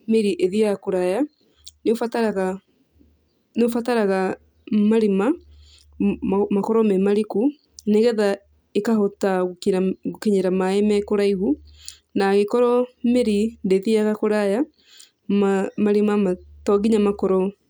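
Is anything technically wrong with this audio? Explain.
No, nothing technically wrong can be heard in this speech recording; the signal stays intact and steady throughout.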